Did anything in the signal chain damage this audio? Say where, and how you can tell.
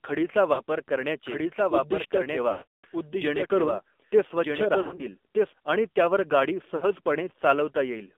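Yes.

AMR narrowband mobile codec, throughout: a call codec at 7.4 kbps restricts the band to 250 Hz to 3.6 kHz, leaving speech plainly buzzy and synthetic from sparse pulse excitation.

Sample clock jitter, throughout: at the converter, an unsteady clock of around a microsecond adds faint roughness that follows loud, bright passages and disappears in pauses.

Lost AMR speech frames, on the network: at 0.54 s for 40 ms, at 2.52 to 2.87 s for 320 ms, at 4.82 to 5.06 s with 100 ms lost in bursts, and at 6.76 to 6.91 s after "त्यावर गाडी" for 60 ms. The decoder stretches the last sound, fades it, then recovers roughly.

Doubled audio track, 1.27 to 5.53 s: a full-band copy about 5 dB quieter trails by about one and a half seconds and starts and stops abruptly, likely from a second, slower capture path.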